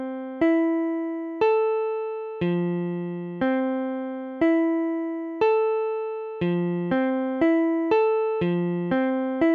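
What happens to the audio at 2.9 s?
Nothing goes wrong at 2.9 s; the audio is intact and continuous at that moment, with no dropout, click or distortion.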